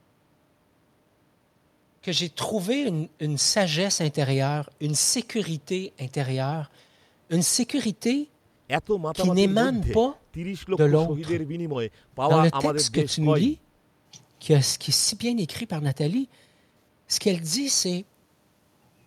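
No technical faults can be heard anywhere in the speech.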